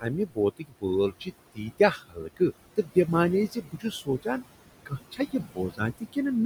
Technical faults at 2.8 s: noise suppressor artifacts; speech cut by the noise suppressor

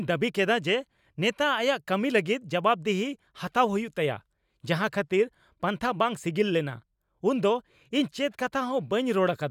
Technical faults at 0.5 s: none

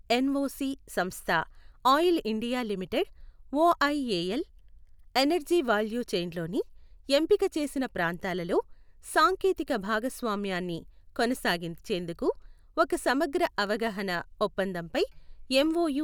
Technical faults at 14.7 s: none

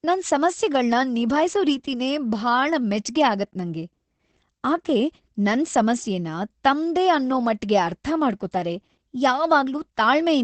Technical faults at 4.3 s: Opus voice compression

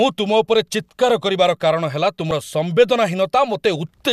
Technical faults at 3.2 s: none

